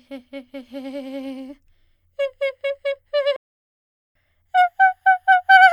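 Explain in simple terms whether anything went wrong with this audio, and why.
A playback stall hits the music at 3.36 s: the sound cuts out in mid-flow and stays silent until 4.15 s, a gap of about 0.79 s. The silence isn't part of the recording. The player most likely ran short of audio data to send out, or the part of the program feeding the sound was briefly held up, so the output had nothing to play until the supply caught up again.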